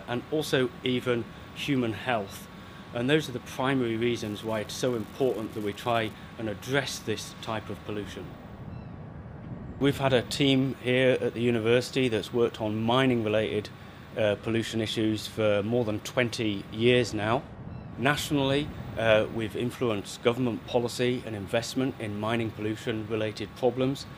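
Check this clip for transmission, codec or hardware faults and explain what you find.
There is one hardware fault, an unreliable data bit, from 4.21 to 6.13 s. During that stretch one line of the digital audio path is marginal, so a single bit flips in a random share of samples. Each flip adds a spike of the same size, about -32 dBFS. The spikes land irregularly, producing a steady crackle or fizz laid over the sound. It persists through quiet moments and stops at 6.13 s.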